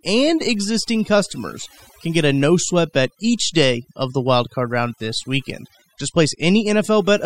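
A speech recording with overdone noise removal running the whole way through. The noise reduction has been pushed too hard, so any frequency band that sits close to its idea of the noise floor gets pulled right down or switched off, and the softer parts of the voice get caught along with the noise. You hear it in the gaps, which drop to near silence with little twinkling specks.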